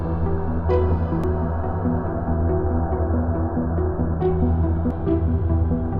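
At 1.24 s a short glitch cuts into the sound. A second one follows at 4.91 s. Both come from damaged data in a compressed stream. Some bytes of the coded audio are corrupted at those points. The decoder cannot read the affected frame properly. It misreads or drops that frame for a moment, then finds the next valid frame header and recovers. Each fault is brief and isolated, heard as a chirp, squawk, click or short hole.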